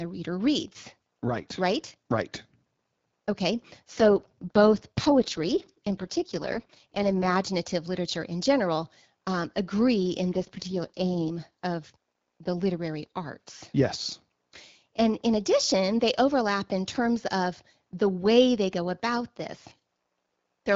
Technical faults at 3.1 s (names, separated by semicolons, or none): none